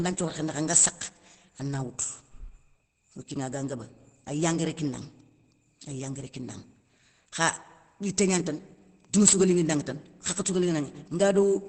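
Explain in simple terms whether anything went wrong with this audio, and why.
Opus compression, likely, runs through the whole clip: the speech sounds muffled and hoarse because the encoder, short of data, switched to its speech mode, which keeps only the essentials of the voice and drops everything above about 8.3 kHz, removing the crisp top end.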